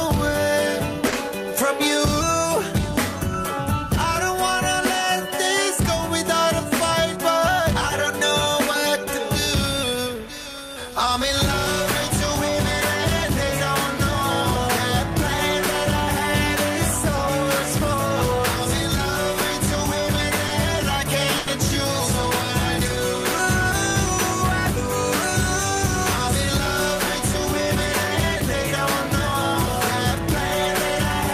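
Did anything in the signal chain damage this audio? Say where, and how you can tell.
Yes, at the network stage: three short stalls from late packets, at 1.07–1.14 s, 20.47–20.51 s and 21.38–21.49 s. Each time the jitter buffer ran dry, so the last sound was stretched for 50, 20 and 90 ms, then resumed without skipping anything, adding that much delay.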